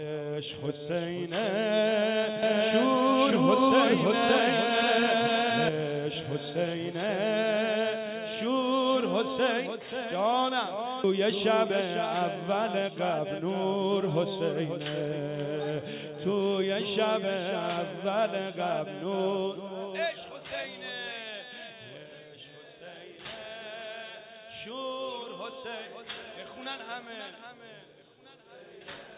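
From 2.43 to 5.69 s a doubled audio track appears, most likely because the sound was captured a second time along a slower route and mixed back in. The copy trails the original by about half a second at roughly the same level. It is full-band and dry, with no reverb tail, so it sounds like a clean echo that switches on and off abruptly at those two edges.

At 11.04 s comes a skip ahead. Around 0.4 s of audio was dropped while later audio was already waiting. Nothing fills the hole, so the sound on either side is butted together and the listener jumps forward abruptly, missing a short stretch outright.

Right after that comes jitter buffer speed-up, where the receiver kept trimming tiny pitch-period slices to bring its backlog down. From 11.22 to 11.81 s it plays about 6% fast, removing roughly 40 ms in total. From 12.35 to 14.0 s it plays about 7% fast, removing roughly 100 ms. Pitch stays put, but the sound feels rushed. 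Throughout, the call path passes nothing above 4 kHz, which fits a narrowband G.711 link.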